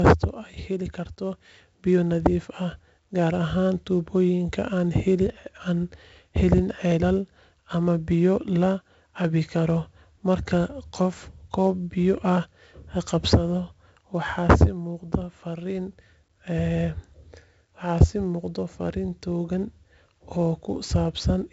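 From start to finish the speech carries heavy 4-bit ADPCM compression: each sample is coded as a coarse step from a prediction, leaving gritty hiss that rides every loud syllable and smears sharp onsets. A spectrogram shows level-tracking broadband noise and nothing above 7.7 kHz, which fits a 16 kHz rate at 64 kbps.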